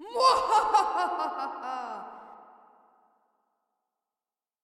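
No technical faults can be heard in this sound at any point.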